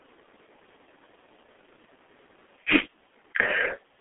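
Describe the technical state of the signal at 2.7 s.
At 2.7 s the speech carries G.723.1 codec damage, as it does for the whole clip. Nothing sounds above about 3.6 kHz, and the band sits roughly between 250 Hz and 3.5 kHz, like a phone line. The codec codes speech in 30 ms frames and refreshes its voice model slowly. The heavy artefacts point to a rate near 6.3 kbit/s. The sound is muffled and hoarse, with smeared consonants.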